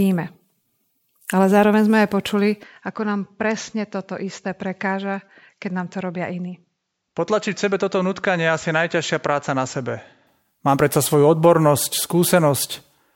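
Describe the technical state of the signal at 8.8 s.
At 8.8 s the signal is inside a stretch, from 2.63 to 10.27 s, that sounds like the input switched to a poorer device. The change comes right after "zároveň sme aj počuli" with no gap: the sound goes duller and slightly quieter, about 5 dB down, with nothing above 7.6 kHz and a faint new noise floor well below the speech. This likely means recording moved to a narrower-band microphone, until the original input returns at 10.27 s.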